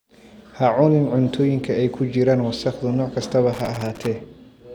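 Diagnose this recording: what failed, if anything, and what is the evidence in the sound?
Loose connector crackle in the analogue wiring, 3.53 to 4.07 s: a worn contact chops the speech, showing as ragged waveform dropouts and irregular broadband vertical streaks on a spectrogram.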